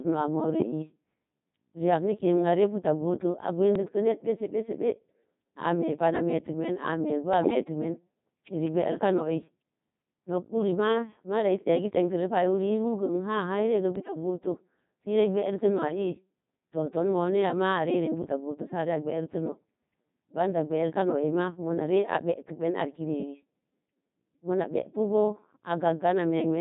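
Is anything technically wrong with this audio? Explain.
Yes. Two problems are present.

Throughout the clip, the speech has passed through a Codec 2 vocoder, and the damage is heavy. The sound fits Codec 2 at around 2.4 kbit/s. The codec does not send the waveform. It sends only pitch, voicing, energy and a coarse spectral envelope. The decoder then rebuilds the voice from sine waves. The result is robotic and buzzy. Natural texture is gone.

There are also bit errors on digital voice radio at four points: 0.60 to 0.72 s, 3.76 to 3.83 s, 7.34 to 7.64 s, and 13.96 to 14.16 s. The first burst is the worst, with roughly 7 percent of bits flipped. The others are nearer 3 percent. Each bit in this vocoder controls a whole frame's pitch, level, voicing or spectrum. A corrupted bit therefore throws the synthesis off for that stretch. You hear sudden pitch jumps, level lurches and warbling bleeps. 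The longest is at 7.34 s.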